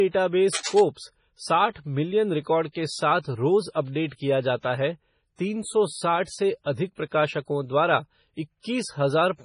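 MP3 compression runs through the whole clip. The speech sounds watery and swirly, with heavy codec damage and nothing above 10.5 kHz. This likely comes from a low-bitrate encode, consistent with about 24 kbps, where weak frequency lines are dropped and return frame to frame and the treble is cut.

Cable scratch noise appears from 0.53 to 0.80 s as dense, uneven bursts of scratchy rustling about 10 dB below the speech. It likely comes from a worn cable, connector or control being moved, making its contact resistance fluctuate rapidly.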